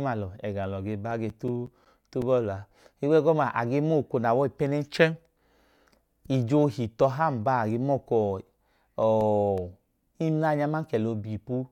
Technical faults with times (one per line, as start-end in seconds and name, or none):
1.11-2.40 CD scratch ticks
8.65-9.76 CD scratch ticks